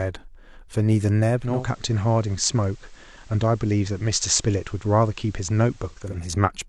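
From 1.29 s to 6.3 s the speech shows digital radio blending to analogue: the receiver lost its digital stream and cross-faded over about 0.41 s to the station's FM signal. A hiss floor rises roughly 35 dB below the signal. The level stays unchanged.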